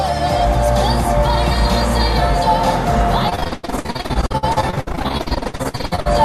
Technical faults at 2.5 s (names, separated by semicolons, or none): none